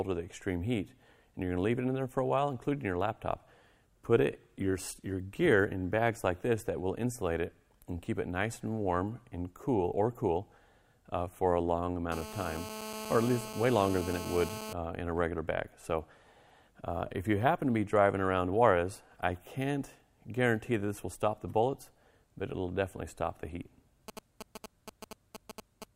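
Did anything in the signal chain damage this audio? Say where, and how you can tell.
Yes. From 12.12 to 14.73 s, a hard, raspy 217 Hz buzz with many harmonics sits about 10 dB below the sound. This is GSM phone buzz in the analogue wiring: a nearby phone on a call sends radio pulses that the audio circuit rectifies. The rasp and the 217 Hz rate set it apart from smoother 50 or 60 Hz mains hum.

From 24.08 to 25.84 s come GSM signalling bursts, a galloping dit-dit-dit of ticks and brief 217 Hz buzzes, roughly 10 dB below the sound. The same analogue path rectifies the short groups of radio bursts a phone sends while signalling. The grouped, uneven rhythm distinguishes it from steady call buzz or random digital clicks.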